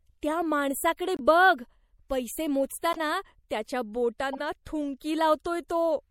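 Across the whole speech clip the sound has a watery, swirling texture, with the top end clipped off flat and sibilants turning metallic and chirpy. This is consistent with MP3 compression at a low rate, likely around 64 kbps. At that rate the encoder runs short of bits, cuts the treble at a fixed frequency and drops quieter spectral lines that flicker in and out from frame to frame. The damage is plainly audible.

Three short artefacts stand apart from that texture, each a corrupt frame decoded. In each one the decoder played a damaged compressed frame, and misread gains or codes put energy at frequencies where it does not belong. The first runs from 1.17 to 1.21 s. It is a brief glitch peaking near -25 dBFS and spans a couple of frames. The second, from 2.92 to 2.99 s, is the loudest, a glitch peaking near -15 dBFS across several frames. The third, from 4.33 to 4.40 s, is another glitch near -25 dBFS spanning a few frames.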